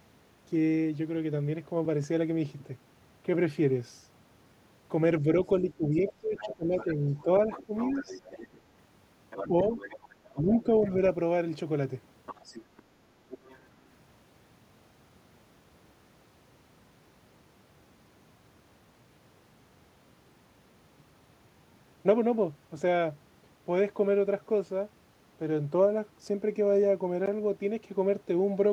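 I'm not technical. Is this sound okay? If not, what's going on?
No. From 5.23 to 7.96 s, 9.48 to 9.74 s and 10.35 to 10.99 s the talker dips and fades. That's speech suppressed in double talk, likely the call's echo canceller turning the talker down when both sides spoke at once. There's also the other side's voice leaking through, faint and in the background, at 5.71 to 8.61 s, 9.3 to 10.63 s and 12.26 to 13.59 s, likely their voice escaping from the loudspeaker back into the mic.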